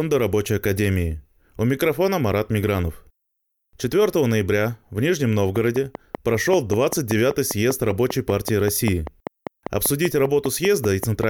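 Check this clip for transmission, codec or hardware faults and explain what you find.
One fault is present. A train of clicks runs from 5.56 s to 11.24 s, about thirty sharp ticks at a steady 5.1 per second. The likely cause is a repeating pulse from outside the audio itself, such as interference from nearby equipment or an interface that keeps glitching, injecting a near-identical transient on a fixed cycle. Each click peaks around 10 dB above the speech, so the ticking sits clearly on top of it and carries on through the pauses.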